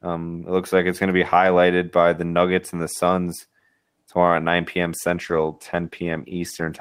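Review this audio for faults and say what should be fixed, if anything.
A call bitrate drop runs from 4.98 s to 6.80 s. The encoder falls from 32 to 13 kbps, staying at its lowest for 1.66 s, so the speech turns coarse and muffled as the highs vanish. Unlike packet loss, nothing drops out, and the sound stays continuous but degraded. To prevent it, keep the call's bandwidth steadier or set a higher minimum encoder bitrate.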